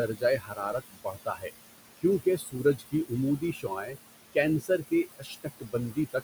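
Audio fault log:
Throughout: noise suppressor artifacts. The steady room noise, sitting about 12 dB under the speech, is pulled down by about 19 dB in the gaps and swells back under each phrase.
0.08–1.51 s, 2.23–3.12 s, 3.39–3.97 s, 4.61–5.75 s, 5.91–6.15 s: speech cut by the noise suppressor. Quiet consonants and word endings were mistaken for noise and dropped by up to about 21 dB, briefly in short stretches. Unlike the background pumping, the speech itself goes swallowed and faint.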